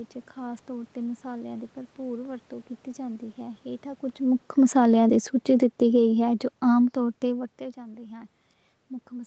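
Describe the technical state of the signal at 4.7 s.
The speech and its background sink together by about 5 dB from 4.5 to 7.54 s: automatic gain falling, as the gain control lowers its gain gradually.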